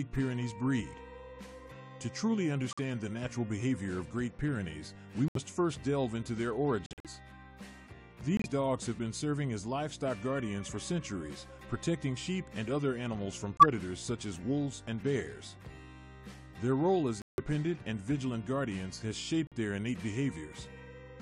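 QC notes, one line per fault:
2.71–2.79, 5.28–5.37, 6.86–7.07, 8.37–8.46, 13.57–13.68, 17.22–17.40, 19.47–19.53 s: corrupt frame muted. Damaged compressed frames were rejected by the decoder and replaced with silence, leaving abrupt holes of about 60–210 ms, multiples of a short frame length, while the timing stays intact.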